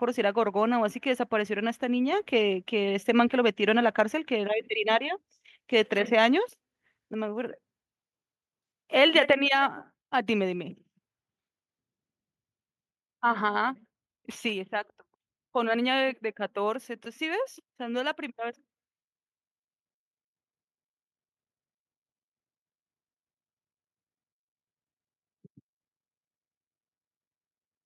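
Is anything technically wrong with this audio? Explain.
Yes. At 9.33 s the microphone volume steps down: speech and background drop together by about 4 dB in a single instant and stay lower. The likely cause is the call software cutting the device's input gain in one move, unlike automatic gain control, which rides the level gradually.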